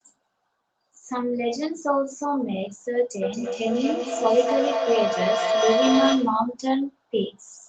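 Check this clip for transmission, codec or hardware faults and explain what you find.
One fault is present, a feedback howl from 3.22 s to 6.5 s. Two devices on the same call were in one room, so the microphone-to-loudspeaker loop gained level on each trip. The sound narrows into a tone around 700 Hz, with repeats roughly every fifth of a second, rising to about the level of the speech.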